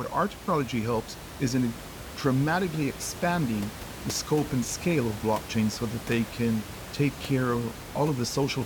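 No technical faults are audible.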